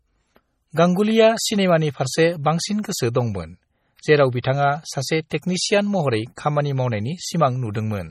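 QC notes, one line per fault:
Throughout, MP3 compression: the speech has a watery, swirly quality, and nothing comes through above about 15.3 kHz. That's most likely a heavily squeezed MP3, with the damage fitting something around 32 kbps. Short of bits, the encoder lops off the top at a fixed cut-off and zeroes out quieter frequency lines, which flicker in and out from frame to frame. That flicker is the swirl you hear, and it also roughens the s sounds.
4.42, 5.30, 5.42 and 6.36 to 6.38 s, pre-echo: each sharp onset is led by a brief smear of hiss, roughly 15 to 20 ms long, and the attack itself lands soft. The codec spreads its quantisation noise across a whole transform block. When a hard attack sits late in that block, noise sized for the loud part leaks into the quiet stretch just before it, so the hiss shows up early.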